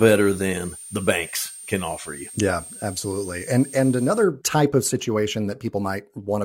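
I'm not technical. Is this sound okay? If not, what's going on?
No. From the start until about 4.24 s, just before "type of", there's a switching supply whistle, a thin, high squeal around 8.6 to 9.2 kHz sitting fairly noticeably under the speech. It comes from a switching power supply's circuitry buzzing at an audible pitch that leaks into the recording.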